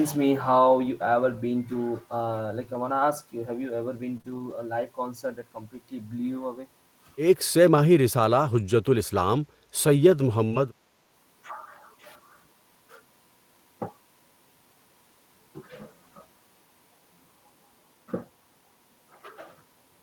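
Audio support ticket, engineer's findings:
Lost packets rebuilt from error correction at 0.83–0.89 s, 2.99–3.01 s, 4.09–4.15 s, 4.26–4.52 s and 10.52–10.58 s. Opus in-band FEC substituted low-bitrate copies, so there are no gaps, but the frames sound rougher and noisier. Spectrogram: grainier bands. The longest stretch, 140 ms, is at 4.26 s.

Short concealed packet loss at 4.17–4.21 s and 4.21–4.26 s, back to back inside the FEC cluster. Decoder PLC extrapolated the last pitch or noise shape for about 19 ms and 27 ms, then crossfaded back. Audible as a brief smear or wobble. Waveform: repeated periods, then a blend seam.

Speech dips at 9.11–9.49 s, around 150 ms in all, deepest about 30 dB. Likely speech suppressed in double talk: the AEC could not tell near-end speech from loudspeaker echo and attenuated both. Waveform: envelope notches.

Burst of packet loss at 10.47–10.54 s. About 40 ms went missing, and 45 ms was synthesised by extending the last sound with a decaying gain into a held buzz or fading hiss, with FEC recovery following immediately. 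Waveform: a tapering repetitive segment. Spectrogram: frozen harmonics fading out.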